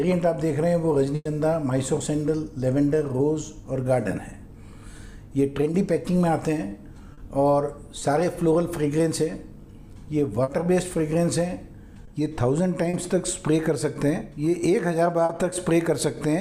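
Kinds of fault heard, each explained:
Burst of packet loss: from about 1.15 to 1.27 s a run of audio was lost. The receiver extended the last sound for 100 ms while fading it, then 20 ms of silence. A spectrogram shows frozen, decaying bands, a blank gap, then an abrupt restart.
Short concealed packet loss: brief 20 to 40 ms holes at 7.13, 7.99, 10.43, 12.05, 12.89 and 15.25 s were patched by continuing the preceding sound, heard as small smears or wobbles. The waveform shows briefly repeated, damped cycles; the spectrogram shows short blurred patches.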